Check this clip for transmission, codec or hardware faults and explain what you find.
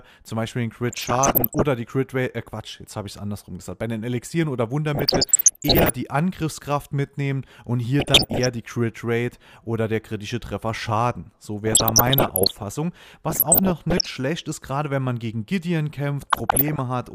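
DAB burbling occurs six times: 0.89–1.62 s, 4.95–5.96 s, 8.00–8.47 s, 11.67–12.63 s, 13.29–14.07 s and 16.21–16.79 s. Uncorrected bit errors, around one percent, corrupt MP2 samples and scale factors, so individual sub-bands jump in level for up to a frame, and short blips of noise appear in single sub-bands.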